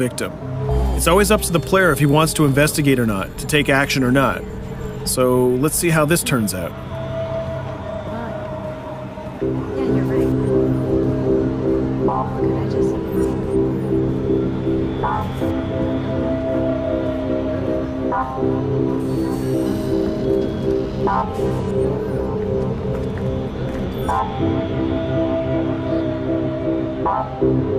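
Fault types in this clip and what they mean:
No fault types are present in this clip.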